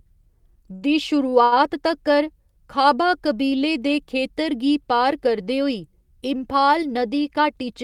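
Short stalls from late packets occur at 0.75 to 0.85 s, 1.30 to 1.35 s and 1.44 to 1.55 s. Each time a packet failed to arrive on schedule, the jitter buffer emptied and the receiver held the last sound in place for 64 ms, 24 ms and 75 ms respectively, then resumed where it had stopped. Nothing is lost, but the speech briefly freezes into a drawn-out sustain with a slight buzz or dip.

A jitter buffer speed-up runs from 7.31 s to the end, at 7.84 s. The buffer had accumulated more delay than its target, so the receiver trimmed small pitch-period-sized pieces in quick succession, about 40 ms in total, playing the speech at roughly 106% speed. The pitch stays unchanged, but the final half-second sounds slightly rushed and compressed in timing.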